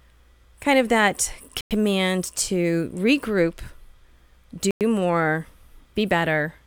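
Two short, hard-edged holes break the speech, at 1.61 to 1.71 s and again at 4.71 to 4.81 s, each 100 ms of silence. This is a gap between chunks: the audio was delivered in 3-second pieces, and silence was left at each join. No speech is lost, but it stops abruptly and resumes 100 ms later, giving a regular 3.1-second rhythm of interruptions.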